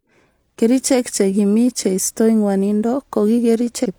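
Near the very end of the speech, from 3.81 to 3.86 s, there is damaged data in a compressed stream: a short run of the encoded bytes is corrupt, so the decoder cannot read those frames properly, loses its place in the stream, and has to hunt for the next valid frame header before normal decoding resumes. For about 50 ms the sound gives way to a brief chirp, squawk, click or short hole.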